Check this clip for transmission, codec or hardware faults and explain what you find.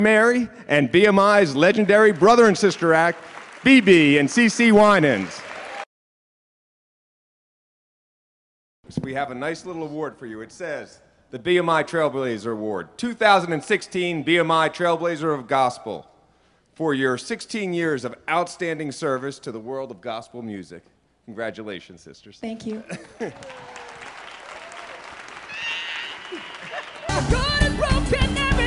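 Nothing stood out on listening to this audio.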